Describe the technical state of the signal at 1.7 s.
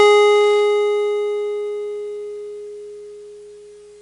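At 1.7 s the music carries 4-bit ADPCM compression, present through the whole clip. Each sample is coded as a coarse step from a prediction. This leaves plainly audible gritty hiss riding the loud passages. Nothing sounds above 10.7 kHz, which fits a bitrate near 89 kbps.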